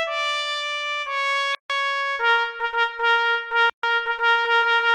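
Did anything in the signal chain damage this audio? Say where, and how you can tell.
Yes. Sound stops for 149 ms at 1.55 to 1.70 s and 136 ms at 3.70 to 3.83 s, then resumes where it left off. These are gaps at joins of encoded pieces: sections about 2 s long, each encoded separately, keep the encoder's start delay and final-frame padding.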